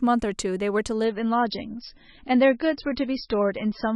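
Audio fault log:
1.05–3.95 s, adaptive stream at a lower bitrate: the speech suddenly turns dull and watery with no gap, loses everything above 5.6 kHz and gains swirly codec artefacts. This points to a slowed connection forcing a switch from MP3 near 128 kbit/s to about 18 kbit/s.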